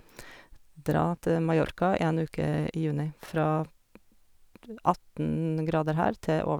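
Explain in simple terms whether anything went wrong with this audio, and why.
Chunks out of order at 1.66 to 1.70 s and 3.24 to 3.28 s: a 20 ms slice of speech arrived late and played after its neighbour, giving a brief jumbled moment.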